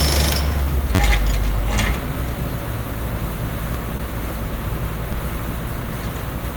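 At 0.63 to 0.67 s there's a short concealed packet loss. About 20 ms of audio didn't reach the decoder in time, so the receiver papered over the gap by extending the last bit of sound it had and then fading back into the real signal. You hear it as a quick little smear in the everyday sounds. The same thing happens again at 3.97 to 4.01 s, with a similar 20 ms hole.

In between, at 0.95 to 0.99 s, comes a repeated buffer. New audio was late, so the device replayed its last chunk four extra times. Each chunk is about 10.7 ms, which fits a 512-sample buffer, and with hard joins between the repeats it comes across as a brief buzzy stutter. Single extra plays at 3.75 s and 5.13 s are just clicks, and in all three cases the stutter seems to delay the sound rather than drop any of it.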